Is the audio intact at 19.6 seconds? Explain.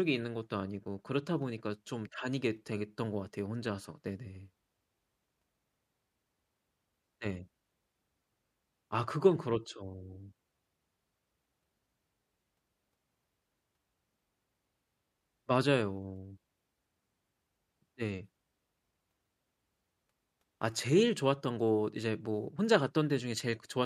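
Yes, at 19.6 seconds the speech plays through intact, with no dropout, click, distortion or other fault to be heard at that point.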